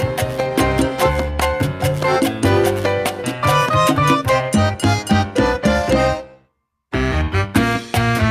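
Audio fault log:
No faults were found in this clip. Nothing in the audio departs from how it should sound.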